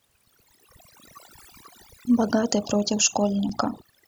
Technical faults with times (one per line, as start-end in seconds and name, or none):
0.00-4.08 overdone noise removal
0.47 overlapping chunks
1.48 overlapping chunks
2.49 overlapping chunks
3.49 overlapping chunks